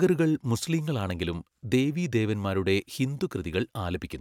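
Nothing stood out as a technical problem on listening to this speech recording.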